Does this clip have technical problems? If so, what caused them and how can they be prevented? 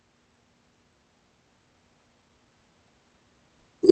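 Yes. A skip ahead occurs at 1.49 to 1.51 s in this speech: roughly 0.7 s of audio vanishes and playback jumps forward with no gap, the two sides spliced almost directly. That points to the jitter buffer discarding queued audio to cut its delay. Prevent it by letting the jitter buffer adapt more gradually, using time-stretching rather than dropping whole stretches.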